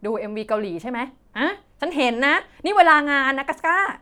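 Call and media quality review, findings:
No audible faults found in this speech recording.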